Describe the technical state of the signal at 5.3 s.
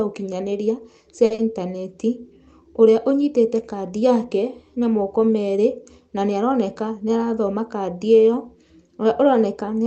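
At 5.3 s the speech comes through intact, carried normally by the WebRTC call path with no fault at that moment.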